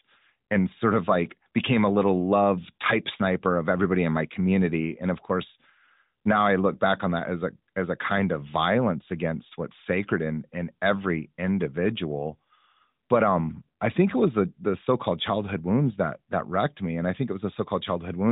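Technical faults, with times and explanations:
No technical faults detected.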